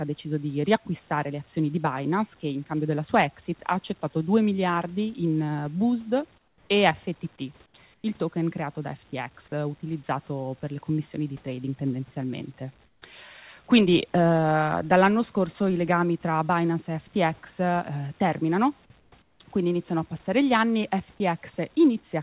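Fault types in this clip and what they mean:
Comfort noise in place of the background: In six short pauses between 6.38 and 19.4 s, the faint room background, about 37 dB below the loud parts, turns into steady, featureless hiss about 5 to 13 dB quieter, likely from discontinuous transmission. No sound is lost; only the background's texture changes.
Sound dropped by the voice detector: From 21.18 to 21.2 s, about 10 ms of real sound gives way to synthetic noise, likely because the voice detector judged it to be background. Unlike the comfort-noise pauses, part of the signal itself disappears rather than just the background.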